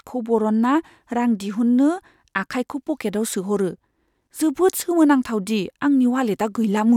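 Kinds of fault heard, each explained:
Nothing here to flag: the speech comes through without any dropout, glitch or other fault you could point to.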